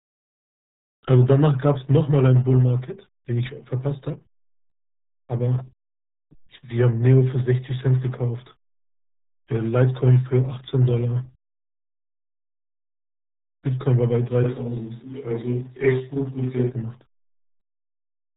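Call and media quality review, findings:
RealAudio 14.4 codec artefacts throughout: muffled, gargly speech, nothing above 3.8 kHz. Heavy damage is consistent with an 8 kbit/s dial-up-era speech coder.

Switch to a distant microphone, 14.46–16.69 s: abrupt roomy, hollow tone with thinner bass, similar level, faint room noise roughly 35 dB below speech. Likely close-mic dropout with fallback to a far pickup.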